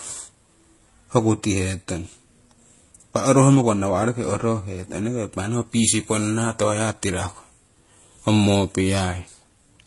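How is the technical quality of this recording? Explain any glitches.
The speech carries layered compression damage throughout. Transcoding between lossy codecs, throughout: a low-rate HE-AAC swirl sits under MP3 smearing, with nothing above 11.3 kHz. That fits a 16 kbit/s encode likely re-encoded to MP3 at 48 kbit/s.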